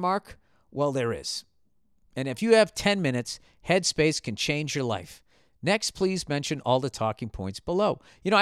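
No technical faults are audible.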